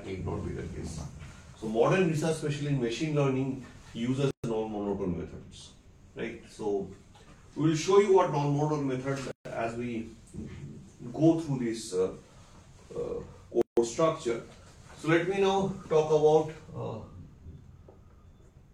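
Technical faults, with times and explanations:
4.31–4.44 s, 9.32–9.45 s and 13.62–13.77 s: gap at a join of encoded pieces. Silences of about 130, 137 and 157 ms cut into continuous sound with smeared edges. Separately encoded segments were butted together untrimmed, leaving encoder start delay and final-frame padding; the sound then resumes where it stopped.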